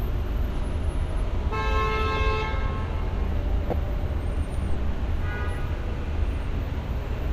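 At 3.70 to 3.73 s a corrupt frame was decoded: damaged bits in roughly two compressed frames were played as if valid, so misread gains and codes put energy at the wrong frequencies. It sounds like a brief chirp, squeak, blip or burst of noise over the sounds, peaking near -10 dBFS.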